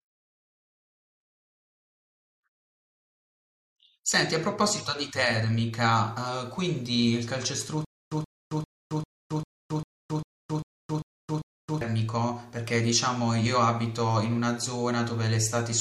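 From 7.85 to 11.81 s, stutter with silent gaps: a 128 ms burst repeats every 397 ms, likely stalled playback. The waveform shows identical blocks between flat silence.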